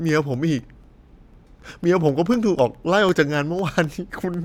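From about 0.09 s to 4.34 s there are periodic USB or driver dropouts: every 0.25 s, something stalls the audio path and a fraction of a millisecond of signal drops to silence. Around twenty of these land as steady little ticks through the speech.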